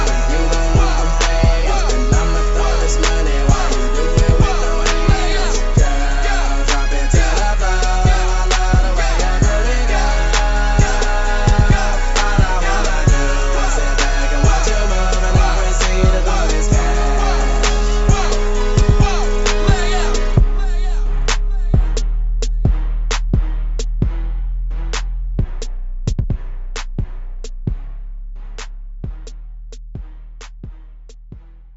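No faults detected anywhere in the recording.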